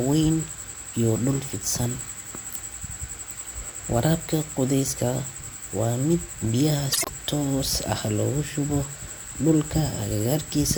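Speech, with frames out of order between 6.92 and 7.09 s. In that stretch, two neighbouring blocks of audio were decoded in swapped order. Each block is about 52 ms long, which suggests runs of a couple of codec frames each. The stretch plays its halves exchanged. It comes across as a brief garbled flutter. No time is lost, and the speech carries on afterward at its normal place.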